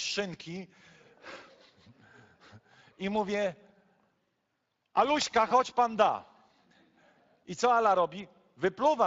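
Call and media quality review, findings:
Speech hoarse and grainy throughout, plainly audible. Speex codec, CELP excitation starved of bits; the damage points to a mid-quality setting around 20 kbps.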